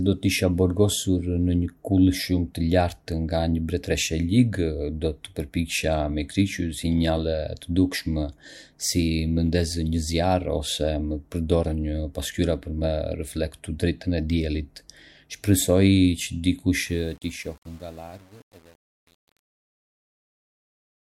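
From 16.84 s to 21.01 s, truncation distortion on a fade: the speech fade-out, starting around 17 s, turns gritty as low levels collapse onto coarse steps, consistent with undithered 8-bit truncation.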